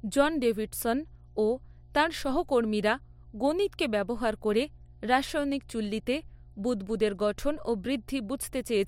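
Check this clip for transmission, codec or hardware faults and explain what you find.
The speech carries one fault: mains hum at 60 Hz, running throughout at roughly 25 dB below the speech. A ground loop or nearby transformer couples the power line into the signal, leaving a steady low tone, unlike broadband rumble.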